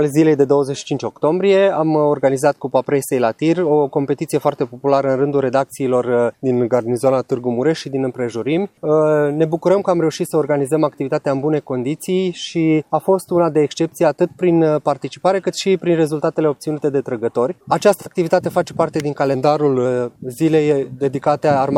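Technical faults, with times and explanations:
6.44–7.39 s and 19.34–19.85 s, drift correction step: in both spots the sound abruptly slows by about 6% and drops by roughly 108 cents, a bit more than a semitone, then snaps back to normal speed and pitch. Speed and pitch move together, so it's a resampling jump, likely from clock-matching software slowing playback in one step to let its buffer refill, then returning to the normal rate.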